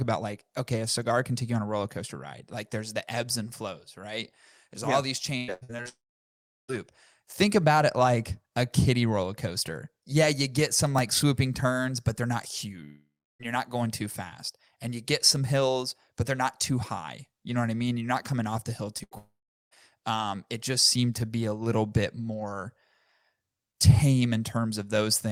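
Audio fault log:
5.37–5.87 s and 18.98–19.78 s, repeated packet loss (robotic sound): a burst of short holes, 5 in the first stretch and 4 in the second, each patched by stretching the last bit of sound. Over half the first stretch is patched (longest hole about 0.10 s), versus about 12% of the second (longest 77 ms), hence the choppy, robotic texture.
5.89–6.70 s, 12.84–13.41 s and 19.18–19.73 s, long network dropout: the audio stops for about 0.80 s, 0.56 s and 0.54 s, the last one landing inside the second choppy patch. Each time there's a short fading tail of the last sound, then quiet for about 0.73 s, 0.33 s and 0.42 s. Audio resumes further on with that part gone, likely from packets never arriving.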